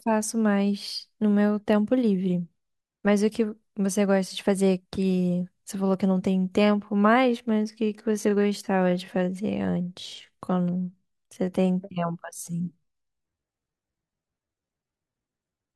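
Speech, with a time-stretched section from 6.26 s to the end at 15.76 s: the pace drops to about 0.68 times normal speed while pitch holds, so the audio drags. This is likely software lengthening by repeating short pieces. A spectrogram shows harmonics at unchanged frequencies but stretched syllables.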